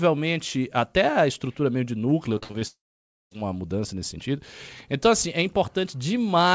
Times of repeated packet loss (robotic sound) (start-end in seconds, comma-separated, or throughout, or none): 2.38-2.63